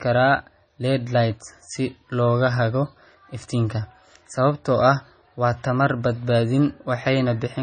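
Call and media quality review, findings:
Low-bitrate audio saved at a high bitrate, whole clip. Speech band-limited, nothing above 9 kHz; dull, swirly coding artefacts. Likely cause: a low-rate MP3 re-encoded as high-rate MP3. Sounds like roughly 24 kbit/s source; the larger second encode cannot restore lost content.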